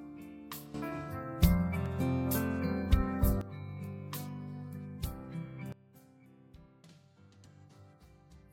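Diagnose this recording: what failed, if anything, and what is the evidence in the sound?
Sudden gain jump, in the digital gain stage of the driver or processing chain. At 0.74 s the level steps up by about 12 dB in a single sample and holds until 3.41 s, where it steps back down. At 5.72 s it drops by about 20 dB and stays low to the end. The background noise rises and falls with the sound each time, so the change was applied to the whole digital signal, likely a gain setting switched without a ramp.

Dropped buffer (overrun), at the driver or buffer stage. At 1.86 s the sound skips ahead by roughly 20 ms. At 7.45 s a larger skip of roughly 50 ms follows. Neither skip leaves any silence. The audio on each side of the gap is joined directly, which points to the likely cause: the capture software fell behind and the hardware overwrote samples before they were read.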